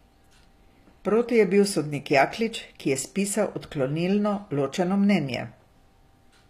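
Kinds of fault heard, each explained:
HE-AAC compression: The likely cause is an HE-AAC encoder that codes only the lower spectrum and rebuilds the treble by copying lower bands upward under a coarse envelope, at a low rate that fits around 24 kbps. In this speech the damage is plainly audible. The synthetic top end stops at 14.9 kHz, and its harmonics do not line up with those below the crossover, so s sounds come out gritty, metallic or lispy rather than clean.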